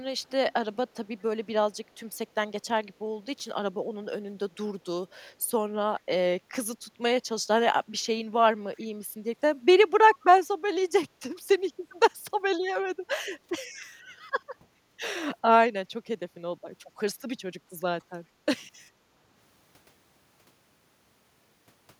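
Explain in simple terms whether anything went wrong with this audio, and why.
Two kinds of problem show up in this speech recording.

The first is an echo leak. At 8.8 to 8.87 s and again at 11.35 to 11.4 s, a very faint, delayed copy of the speech slips in about 410 ms after the original, the second even quieter than the first. The likely cause is that someone on the call was using a loudspeaker, and the echo canceller meant to keep the microphone from picking up that loudspeaker let small scraps through.

The second is background gated by the echo canceller. At 11.09 to 11.2 s and at 14.0 to 14.09 s, the quiet room sound behind the speech briefly dips and then comes back, the first dip deeper than the second. Each lasts about a tenth of a second. This happens when the echo canceller hears the loudspeaker playing and sharply turns the microphone down for a moment, then lets go.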